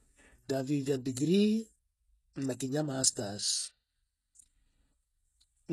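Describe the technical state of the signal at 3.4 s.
At 3.4 s the speech carries the same coding damage heard across the whole clip, likely HE-AAC compression at a low bitrate near 16 kbps. The treble is rebuilt from copied lower bands, so sibilants turn gritty and lispy, with nothing above 12.3 kHz.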